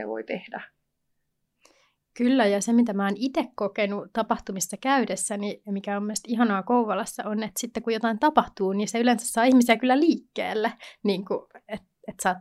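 Speech recording, no technical faults detected anywhere in the clip.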